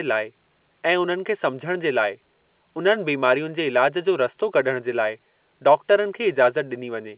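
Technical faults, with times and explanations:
No technical faults are heard; the speech arrives through A-law telephone coding, which keeps it inside the narrow telephone band.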